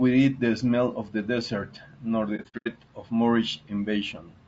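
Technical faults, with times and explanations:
Throughout: low-delay AAC compression. The speech sounds rough and grainy, with noise filling the gaps between pitch harmonics. The likely cause is a low-delay AAC codec such as AAC-ELD. Its short frames resolve pitch poorly, and the damage fits a bitrate around 32 kbps.
2.36 to 2.68 s: AAC frame loss with muting. About 210 ms of sound drops out in several gaps spread over 300 ms. The longest gap is around a tenth of a second. The decoder zeroed the lost frames, and the overlapping windows fade each hole softly out and back in.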